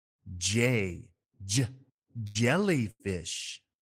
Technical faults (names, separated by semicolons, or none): burst of packet loss